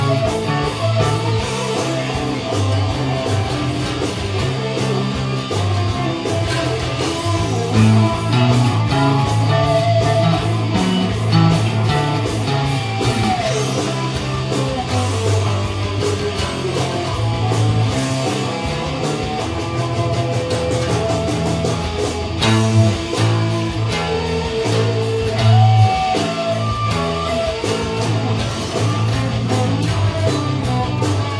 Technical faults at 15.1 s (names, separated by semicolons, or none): none